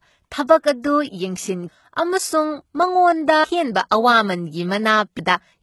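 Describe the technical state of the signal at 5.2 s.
At 5.19 s the speech jumps forward: a stretch of roughly a third of a second is gone, and the material on either side is butted together with no silence between them. This is audio missing between chunks, likely from a recorder that handles the signal in 2-second blocks and drops a piece at each handover. On a waveform the envelope changes abruptly at the join, and on a spectrogram the harmonic tracks break and restart without a gap.

Running through this moment, as through the whole clip, is heavy HE-AAC compression, likely at about 16 kbps. Only the lower spectrum is coded directly, and the treble is rebuilt by spectral band replication, which copies lower bands upward and shapes them with a coarse envelope. The synthesized treble leaves harmonics misaligned across the crossover, so sibilants sound gritty and metallic. A spectrogram shows the upper bands as blurred, repeated copies of the lower ones.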